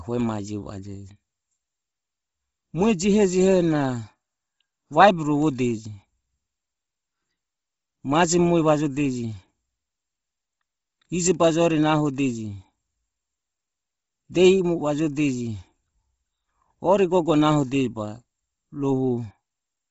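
Speech runs its full length with nothing above about 7.7 kHz, and the upper band has a breathy, grainy, noise-filled texture from start to finish. The likely cause is heavy Bluetooth LC3 compression, consistent with 7.5 ms frames at roughly 24 kbps.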